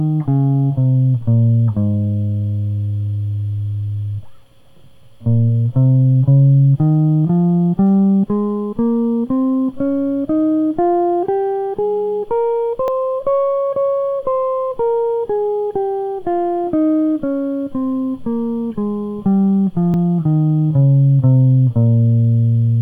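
At 12.88 s the music jumps. About twenty milliseconds is missing, and the two sides meet directly with no gap. At 19.94 s a shorter skip of roughly ten milliseconds follows. Both are likely dropped buffers from an overrun.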